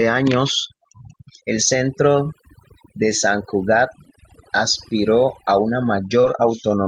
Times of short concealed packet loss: 2.23-2.27, 6.21-6.25

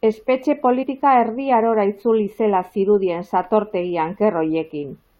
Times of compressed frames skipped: 0.82-0.84

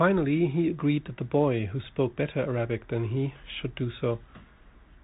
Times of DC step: none

